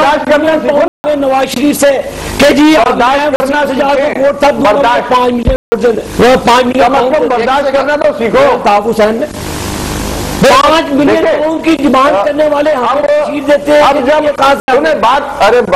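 Four times, the output stream received blocks of zeros in place of audio, which fits buffers that were not filled in time. Each block of digital silence starts and stops abruptly with no fade. The gaps are 0.88 to 1.04 s (160 ms), 3.36 to 3.40 s (40 ms), 5.56 to 5.72 s (160 ms), and 14.60 to 14.68 s (80 ms). The 40 ms gap is close to a pop, while the longer ones are audible holes.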